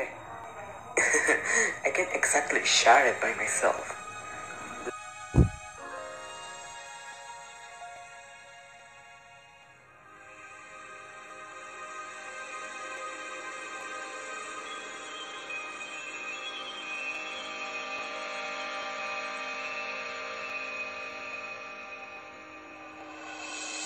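From 0.44 s to 23.84 s, a click or pop recurs every 0.84 s, around thirty in all, at a steady, metronome-like spacing whenever there is signal. These are clock drift buffer slips, likely caused by two devices running on independent clocks that disagree by roughly 0.1 percent. The buffer between them slowly fills or drains until a block of a few dozen samples is dropped or repeated, and each jump leaves a discontinuity that is heard as a click.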